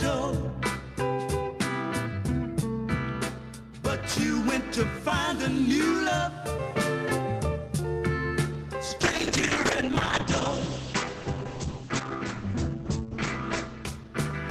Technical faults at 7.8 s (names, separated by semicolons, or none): none